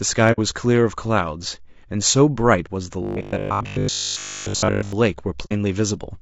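The speech has a rough, grainy texture from start to finish, with a hiss-like fill between the harmonics and a top end that sounds thin and a bit synthetic. That's likely low-delay AAC compression, the AAC-ELD flavour used in video calls. Its short frames can't separate pitch harmonics cleanly and need more bits to sound good. The damage is plainly audible here, which fits a bitrate somewhere around 32 kbps.

From 0.32 to 0.39 s there's a soft-edged gap in the sound. That's AAC frame loss with muting. Data went missing, the decoder zeroed the spectrum for it, and the overlapping windows faded the audio out and back in. The length fits roughly two frames, about 60 ms, dropped.

Between 3.03 and 4.93 s the speech turns into a stiff metallic buzz at 50 Hz that only loosely tracks what's being said. This is robotic sound from repeated short buffers. Fresh audio was likely arriving too slowly, so the software kept replaying the last scrap while the real signal was skipped. 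The repeats cover essentially the whole stretch, and the 50 Hz pitch points to a buffer of about 20 ms.

The same muted dropout happens again from 5.45 to 5.53 s. It's another AAC frame loss with muting, with the same gentle fade-out and fade-in, and it again fits about two lost frames.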